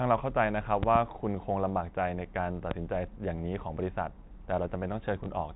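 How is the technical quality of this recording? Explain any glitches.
The recording has three audible glitches: two loud pop events early on and one brief packet-loss blip near the end. The sound is band-limited to telephone quality, with nothing above 4 kHz, as G.711 coding produces.

Loud pops: Between 0.83 and 0.98 s there are two pops in quick succession, peaking at roughly 15 dB above the speech. A single, stronger pop follows at 2.71 to 2.74 s, at roughly 20 dB above it. Each is most likely a sudden voltage step or pulse from a plug, switch or static discharge, added on top of the signal and shaped by the circuitry after it. They are heard as sharp thumps while the speech carries on underneath. On a waveform they are tall spikes standing well clear of the speech envelope. On a spectrogram they are bright vertical stripes spanning the whole band.

Packet loss with last packet repeated: At 5.24 s a 20 ms stretch is missing, which fits a single lost packet. 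The receiver filled the gap by replaying the previous 20 ms of audio. The repeat is heard as a small blip. A spectrogram shows a duplicated block. A waveform shows the same short cycle pattern twice in a row.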